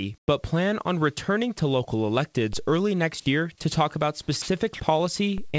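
Speech heard through a call path with nothing above 8 kHz, a band limit that fits a wideband codec such as G.722, carries three kinds of fault. From 0.18 to 0.28 s, just before "plan on returning to", the real background is replaced by comfort noise, likely from discontinuous transmission during the pause. It is a flat, featureless hiss about 7 dB off the surrounding level, set apart from a dropout by keeping noise rather than going silent. After "year to talk about", two 60 ms stretches at 4.42–4.48 s and 4.74–4.80 s are sound dropped by the voice detector, likely because it misjudged the sound there as background. The sound gives way to comfort noise, unlike a concealed loss, which would smear or repeat the sound. From 5.50 to 5.55 s a short concealed packet loss fills 34 ms of the 40 ms of missing audio with an extended continuation of the preceding sound, heard as a brief wobble or smear.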